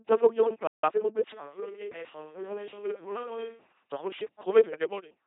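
The speech passes through an LPC-10 vocoder at 2.4 kbit/s throughout, which rebuilds every moment from a buzz or hiss source, leaving a heavily damaged, mechanical robot voice. From 0.67 to 0.84 s, a playback stall, likely from the player running short of data, silences the sound mid-flow for about 160 ms. From 0.84 to 1.14 s, time-compressed catch-up cuts and cross-fades small pieces to clear the backlog, so the audio runs 1.5 times faster at normal pitch.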